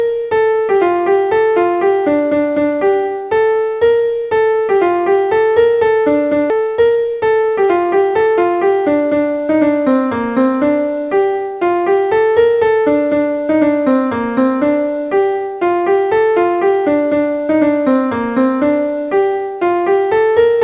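At 6.5 s the sound jumps abruptly forward, with about a second missing and the two sides butted together: a skip ahead, where audio was dropped while later material was already queued. From 6.60 to 8.42 s the audio runs hurried at unchanged pitch, about 11% fast. This is a jitter buffer speed-up, trimming roughly a fifth of a second of pitch periods to shed excess delay. Through all of it the G.711 call path's 4 kHz band limit stays audible.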